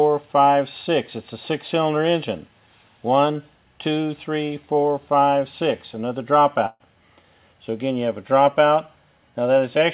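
At 6.66 s there is a burst of packet loss, lasting to 6.82 s. About 140 ms of audio never arrived. The receiver filled roughly 136 ms by extending the last sound and fading it, then a brief 10 ms silence. The sound resumes later, skipping the lost part. The audio tops out at 4 kHz, which fits a G.711 call codec.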